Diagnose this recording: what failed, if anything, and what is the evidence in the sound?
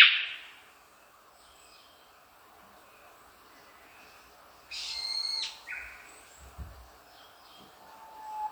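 Nothing failed in this recording, and there is no evidence in the sound of a fault at any stage.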